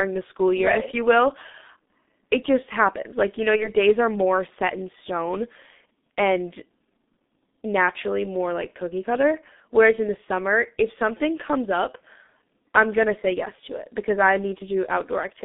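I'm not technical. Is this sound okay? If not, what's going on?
No. The whole recording passes through the G.723.1 codec, an old internet-phone format. It drops everything above 3.6 kHz, so the voice sounds muffled and hoarse and consonants blur.

From 3.56 to 3.68 s there is VoIP packet loss concealed by the speech codec. About 30 ms of audio went missing, the decoder filled it with a fading guess, and the voice stays weak or distorted for tens of milliseconds afterwards.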